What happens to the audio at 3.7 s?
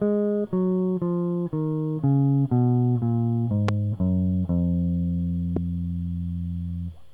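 A single sharp loud pop cuts through the music from 3.69 to 3.71 s, peaking well above it, while the music carries on underneath. It is likely a sudden voltage pulse, from a plug, switch, static or driver glitch, added to the signal.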